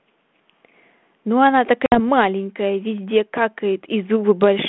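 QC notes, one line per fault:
1.86–2.00 s, packet loss on an ADPCM call: a hard-edged silent hole, then the speech returns with brief, slight distortion. About three packets (60 ms) went missing, throwing the G.726 decoder's adaptive predictor and step size out of step until they realigned.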